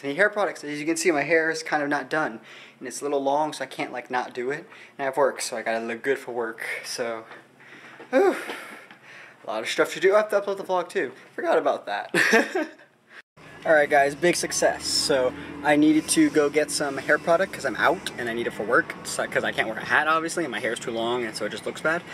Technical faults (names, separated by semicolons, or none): none